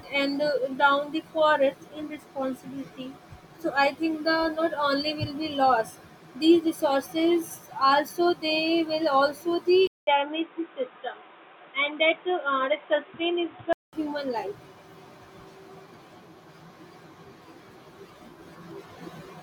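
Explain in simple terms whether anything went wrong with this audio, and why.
At 9.87 s there's a short gap, then the speech turns dull and boxy with new background noise until 13.93 s, likely an input switched to a poorer device.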